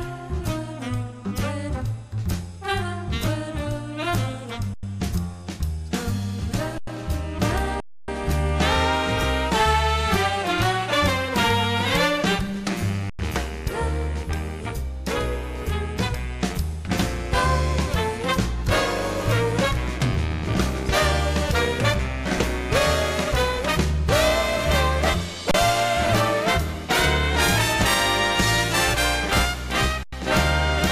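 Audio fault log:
4.74–4.83 s, 6.78–6.87 s, 7.80–8.08 s, 13.10–13.19 s, 25.51–25.54 s, 30.03–30.12 s, underrun with held sample: the output buffer ran dry six times, and the converter held its last value until data returned. Four gaps last 93 ms, which fits a 4096-sample buffer. The others last 279 ms and 31 ms. The sound stops and then resumes softly where it left off, with almost nothing lost. The waveform shows flat stretches, and the spectrogram shows blank vertical bands.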